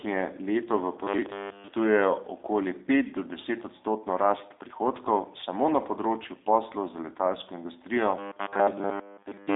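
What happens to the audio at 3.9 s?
At 3.9 s the speech is still passing through the G.729 codec, as it does for the whole clip, at what sounds like an 8 kbit/s rate. The codec models each 10 ms frame with a vocal tract filter, a pitch predictor and a few pulses, so the result is clearly rough and synthetic. Nothing above 3.8 kHz gets through, and the band from 300 Hz to 3.7 kHz gives a narrow, telephone-like tone.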